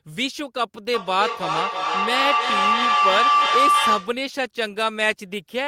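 A speech clip with a feedback howl starting at about 0.94 s and running to 4.28 s. It sounds like two devices in the same room sharing a call: each trip around the mic-to-speaker loop comes back louder, so the repeats swell rather than die away and narrow down to a tone around 1 kHz. The loop repeats roughly every 0.3 s, and the howl peaks at about 5 dB above the speech.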